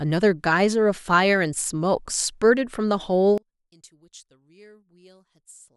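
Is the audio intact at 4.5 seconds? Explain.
No. From 3.38 s to the end of the clip, the centred speech collapses by about 28 dB when heard in mono, leaving only a faint residue. The likely cause is one channel inverted: with one side's polarity reversed, everything common to both channels cancels on summing, and only their difference remains. A simple dropout or gain drop would lower everything evenly, but here only the small mismatch between the channels survives.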